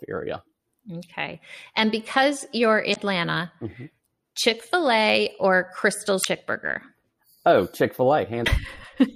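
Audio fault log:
2.91–2.97 s (after "because you're"), 6.21–6.26 s, 8.43–8.48 s: damaged data in a compressed stream. Corrupted frames make the decoder lose sync, producing brief glitches of about 0.06 s each.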